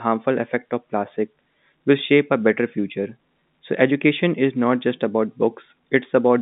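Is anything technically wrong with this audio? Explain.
No, nothing is technically wrong.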